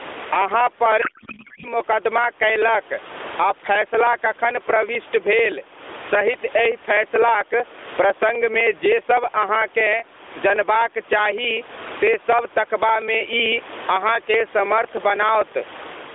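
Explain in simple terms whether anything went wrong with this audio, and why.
The whole clip pumps. Loud and quiet parts end up squashed close together. That's gain pumping, likely from the mic gain being set way too high with a fast limiter yanking it back down.

From 0.10 s to 16.04 s there's a steady stream of tiny ticks, one every 0.063 s. Each time, about a millisecond of audio simply goes missing. That's periodic USB or driver dropouts: something in the background keeps stalling the audio path on a fixed schedule, a few hundred times over the clip.

Between 1.02 s and 1.66 s the speech turns into garbled, warbly noise that barely tracks what's being said. That's a codec payload misread. The sending side packed its mobile-codec frames one way, the receiving side unpacked them another way, and the decoder turned the scrambled bits into junk.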